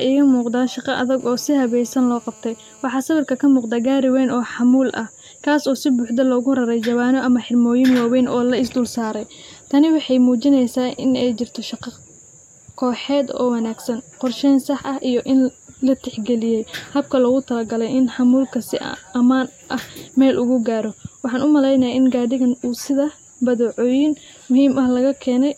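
From 1.2 to 2.84 s, GSM phone buzz sits under the speech. A nearby 2G phone on a call pulses its transmitter 217 times a second. The audio circuit rectifies those bursts. The result is a steady, raspy 217 Hz buzz, rich in harmonics, about 32 dB below the speech.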